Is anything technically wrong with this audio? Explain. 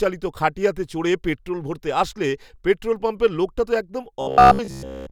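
Yes. Robotic sound from repeated short buffers runs from 4.21 s to 5.11 s, just after "পাম্পের লোকটা তো একদম". It is a rigid, metallic 66.8 Hz buzz, likely from audio arriving too late, so the last 15 ms chunk was replayed for most of that stretch.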